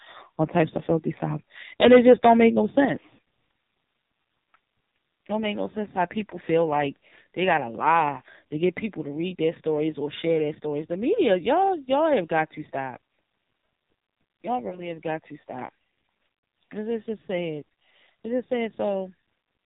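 Speech here sounds buzzy, synthetic and band-limited with nothing above 4 kHz, the heavy damage of the AMR narrowband mobile codec, which fits its low 5.9 kbps mode. At 2.85 s the whole level drops abruptly by about 5 dB, likely the microphone volume stepped down by call software. Brief dips or warbles at 3.16 to 3.18 s and 6.30 to 6.37 s, and a longer drawn-out fade at 14.68 to 14.96 s, are lost AMR speech frames: the decoder repeated its last good settings with falling gain, which fits one 20 ms frame missing in each of the first two and two frames (40 ms) in the last.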